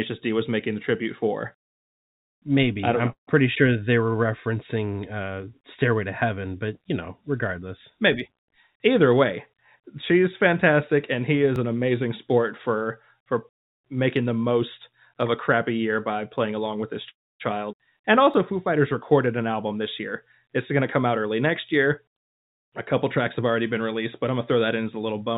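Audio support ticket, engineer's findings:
Call audio freeze, 3.12 to 3.30 s, after "I'm know": last sound stretched into a brief fading tail, then about 120 ms of silence, 152 ms inserted in total. Likely packet delay draining the jitter buffer. Audio resumes where it stopped, nothing lost, latency up 152 ms.

Call audio freeze, 17.10 to 17.43 s: same signature, longer. Fading tail, then roughly 270 ms silent, 302 ms inserted, no content missing. Delay rises by 302 ms.

Dropped buffer (overrun), 11.56 s, between "she's fantastic and he" and "an amazing sport for": small jump in the sound, around 20 ms gone, no silence. Likely capture side not reading samples before hardware overwrote them.

Dropped buffer (overrun), 18.34 s: same jump, roughly 20 ms missing, sides butted together.

Skip ahead, 17.72 to 17.76 s: playback jumps forward with an 8 ms join, about 150 ms of speech absent. Audio dropped in transit or by an overflowing jitter buffer, cutting roughly 150 ms of delay.

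Jitter buffer speed-up, 19.26 to 19.82 s: speech runs at 110% speed, pitch unchanged, sounds hurried. Receiver trimmed short pitch-period chunks in sequence, about 70 ms removed in total, to shrink excess buffered audio. Path is G.711 mu-law at 64 kbps, band-limited to 4 kHz, no content above.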